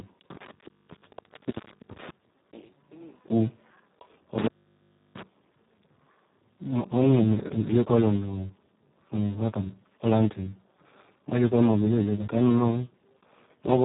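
From the start, the speech sounds hoarse, buzzy and robotic, with nothing above 3.8 kHz. That is heavy Speex codec damage, consistent with a very low bitrate around 4 kbps that starves the excitation. At 0.30 to 2.10 s and again at 4.38 to 5.22 s, the sound crackles and drops out for about 1.39 s and 0.68 s. These are intermittent contact faults, where a loose connection briefly opens the line.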